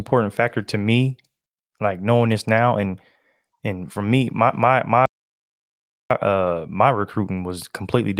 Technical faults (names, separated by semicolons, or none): playback stall